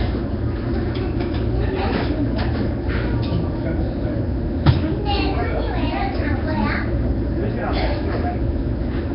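Nellymoser compression affects the whole clip, with heavy damage and nothing above 5.3 kHz. The sound has a rough, hissy halo and a smeared, underwater quality, likely from Nellymoser Asao coding weak bands as noise at a low rate that fits about 22 kbps.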